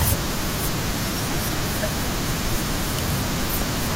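From 3.49 to 3.63 s, DAB burbling: uncorrected bit errors corrupt MP2 sub-band data, giving short noise blips in single sub-bands over the speech. The spectrogram shows isolated bands flickering blockily.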